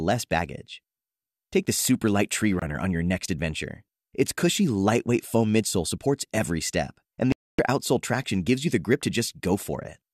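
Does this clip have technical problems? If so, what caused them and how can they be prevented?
Yes. There are two digital broadcast dropouts in this speech. The receiver muted at 2.59 to 2.62 s and at 7.32 to 7.59 s. The first gap fits about one lost frame. The second gap fits about eleven. Better reception or stronger error protection would prevent it.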